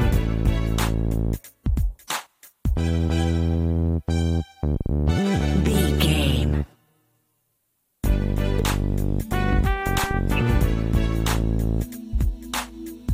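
At 8.6 s, compressed frames skipped: roughly 50 ms of audio never decodes, so the sound jumps ahead.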